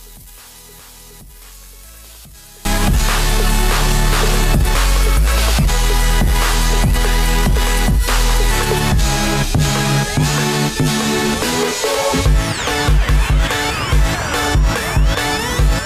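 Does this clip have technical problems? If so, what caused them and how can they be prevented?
Yes. One channel inverted, 0 to 2.65 s: in mono the sound drops by about 25 dB, likely because reversed polarity cancels everything common to both channels. Check each channel's polarity and audition a mono fold-down before export.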